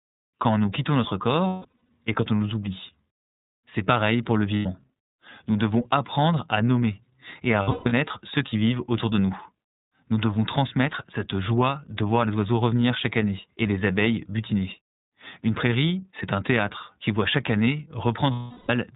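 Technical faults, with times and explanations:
Throughout, iLBC codec: the speech is band-limited to nothing above 4 kHz and sounds plainly rough and slightly synthetic, which fits a 13.33 kbps narrowband stream coded in 30 ms frames; a spectrogram shows an empty region above 4 kHz and a coarse, grainy harmonic texture below it.
1.47 to 1.89 s, lost iLBC frames: 330 ms of audio goes missing, scattered over about 420 ms, with the longest unbroken gap around a fifth of a second. The decoder fills it by repeating the last pitch cycle mixed with noise, so a held, buzzy vowel is heard fading down. On a spectrogram the harmonics run flat and smear while energy drops, and the waveform shows a repeating cycle that shrinks.
4.57 to 4.66 s, lost iLBC frames: a short 90 ms loss is concealed the same way, heard as a brief frozen, slightly breathy vowel. On a spectrogram it appears as a short flat stretch of harmonics, and in the waveform as a few similar, noisy repeated cycles. 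Each frame decodes independently, so the voice is right again almost at once.
7.62 to 7.93 s, lost iLBC frames: 240 ms is lost across about 300 ms, with the longest gap roughly 150 ms. It gives a stuttering hum where the held pitch cycle takes over and decays. On a spectrogram, horizontal harmonic lines flatten in patches, and the waveform shows cloned, fading periods between short stretches of real speech.
18.33 to 18.70 s, lost iLBC frames: the longest single loss, 360 ms, is heard as a stretched buzzy vowel that fades toward breathy noise. On a spectrogram the harmonic lines go frozen and flat and then dissolve into noise, and the waveform amplitude tapers across repeated, noisy cycles.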